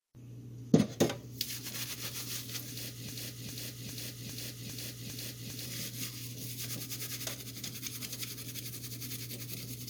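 A broken-record loop runs from 3.09 to 5.66 s in this recording of sounds: a 0.40 s fragment repeats exactly, back to back, six times. The player or stream likely stalled and kept resending its last buffered piece, so the sound that belonged there is lost.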